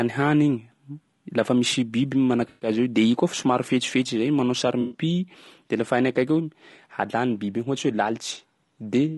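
Throughout, the speech has a rough, grainy texture with noise filling the gaps between harmonics and a thin, synthetic-sounding top band, plainly audible low-delay AAC compression. The likely cause is AAC-ELD's short frames resolving pitch poorly at a rate around 32 kbps, a grain that stays constant rather than coming and going like packet damage.

At 2.50 to 2.69 s, just before "azy eo de", and again at 4.81 to 5.01 s, there is AAC frame loss with concealment. For about 120 ms each time, which fits six lost frames, the decoder rebuilt sound from the last good spectrum, producing a smeared, noisy, phasey patch rather than a dropout to silence or a clean click.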